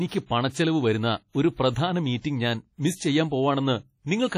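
Throughout, likely heavy WMA compression, consistent with about 32 kbps, smears the speech into ringing, washy sound with breathing hiss and nothing above 15 kHz.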